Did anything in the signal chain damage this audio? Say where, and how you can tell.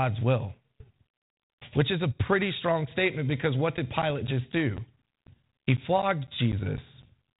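Yes, at the driver or buffer stage. Right after "strong statement because what", at 3.77 s, periodic USB or driver dropouts begin: short gaps of silence, roughly 10 ms each, every 0.25 s, running through about 7.03 s. That steady quarter-second tick, heard only while the speech is sounding, points to something blocking the USB bus or audio driver on a fixed schedule. The light 32 kbit/s G.726 band limit at 4 kHz doesn't account for these gaps.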